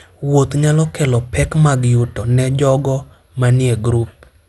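Generation loss runs throughout the speech. Swirly, hollow smearing and blurred attacks exceed single-encode damage, likely from about four MP2 passes, with nothing above 11.9 kHz.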